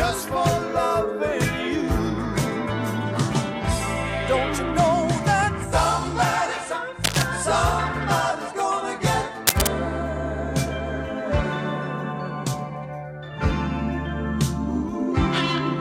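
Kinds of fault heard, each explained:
Cable scratch noise: Two brief bursts of dense, uneven scratching, at 7.04 to 7.22 s and 9.47 to 9.68 s, roughly level with the sound and then somewhat louder, likely from a worn contact being moved. Unlike isolated clicks, each is a rough, sustained rustle.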